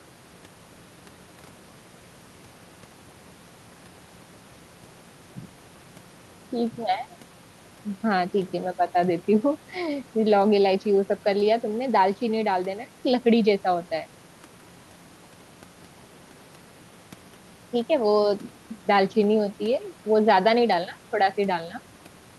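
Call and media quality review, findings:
No faults found.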